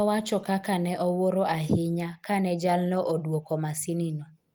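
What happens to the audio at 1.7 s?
Nothing goes wrong at 1.7 s; the speech continues there without any audible break, dropout, click or distortion.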